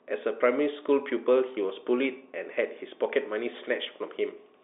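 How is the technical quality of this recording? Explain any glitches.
No glitches turn up anywhere in this speech recording, which simply carries the narrow sound of G.711 telephone coding, with the line band running roughly from 300 Hz to 3.6 kHz and nothing above 3.8 kHz.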